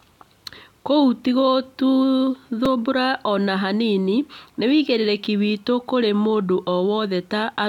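Repeated buffers at 2.65 s and 5.39 s: each time, fresh audio failed to arrive and the last 5 ms block was played once more, which fits a very small buffer. The hard joins make each repeat a short click in the speech, with about 5 ms of audio lost each time.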